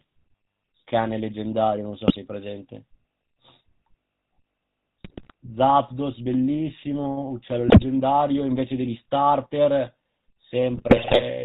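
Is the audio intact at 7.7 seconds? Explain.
No. From 7.68 to 7.84 s, GSM bit errors corrupt the received stream. Flipped bits reach the decoder and garble the filter, pitch and gain parameters it uses to rebuild each frame, so the spectrum bends and the level jumps from one frame to the next. The damage lasts about 0.16 s, which fits roughly seven 20 ms frames on a link losing around 5 percent of its bits, and the speech breaks into a brief squawk, pops and gargling.

Underneath that, and at this moment as everywhere in the clip, the GSM full-rate codec is plainly audible. It fits the 13 kbps full-rate coder, which models the vocal tract and drives it with a sparse pulse excitation that keeps only every third sample. Everything above 4 kHz is missing, and the coarse excitation gives the voice a buzzy, gravelly roughness, so the audio is not intact here even apart from the error burst.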